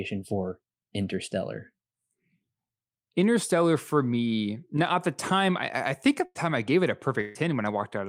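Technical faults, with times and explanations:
6.25–6.37 s and 7.21–7.37 s, burst of packet loss: after "time I I think" and again after "I gave it a", roughly 100 ms and 140 ms of audio never arrived. The receiver stretched the preceding sound and faded it across each gap, giving a brief held buzz or hiss before the speech resumes further on.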